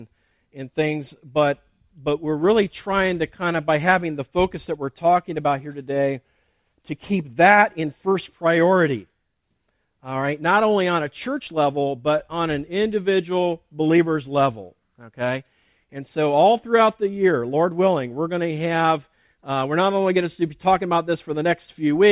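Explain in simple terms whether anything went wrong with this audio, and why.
Nothing went wrong; no faults can be heard.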